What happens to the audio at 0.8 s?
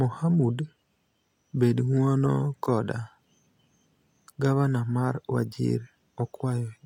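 Nothing goes wrong at 0.8 s; the speech passes through that moment intact, with no dropout, click or other disturbance.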